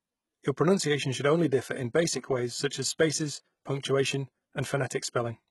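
Heavy codec damage runs through the whole speech clip, and nothing reaches above 11.8 kHz. The likely cause is HE-AAC compression at a low rate, which fits roughly 16 kbps. Here the codec keeps only the lower spectrum. It then rebuilds the treble by copying lower bands upward and shaping them with a rough envelope. That synthetic top end does not match the real one, so harmonics fail to line up across the join. S sounds come out gritty, metallic or lispy.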